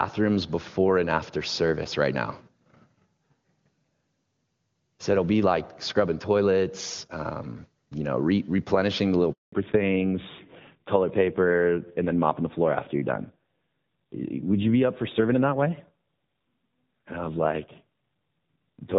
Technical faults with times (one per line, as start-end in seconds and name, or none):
9.32-9.52 handover gap
9.52-18.98 fallback to narrowband